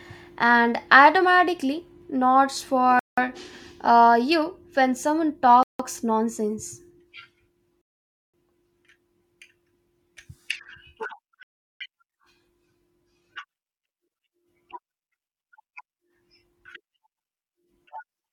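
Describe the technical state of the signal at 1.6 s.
At 1.6 s the speech signal is intact, with no dropout, clipping, glitch or other fault at that point.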